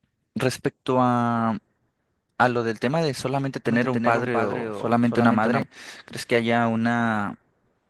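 Opus voice compression runs through the whole clip, and the damage is plainly audible. The coder works in hybrid form, with linear-prediction coding of the band below 8 kHz and a transform layer carrying the top of a fullband signal. The speech sounds muffled, hoarse and faintly robotic because the excitation is coded coarsely, which fits a bitrate around 16 kbps.

A doubled audio track appears from 3.66 s to 5.62 s. A second full-band copy of the speech trails the original by roughly a third of a second, at about 5 dB lower. It has no decay or room colour, so it sounds like a flat, distinct repeat rather than reverberation. It cuts in and out abruptly at both ends, which points to a slower capture path likely picking up the same sound twice.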